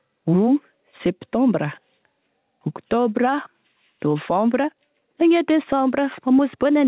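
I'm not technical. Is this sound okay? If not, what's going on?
No. Gain pumping runs through the whole seven seconds: the level keeps rising and dipping. This likely comes from the microphone being turned up too high, with an automatic level control clamping down on every loud moment. The swing is moderate, but it squashes loud and soft parts together. The narrow, phone-like tone comes from the call connection.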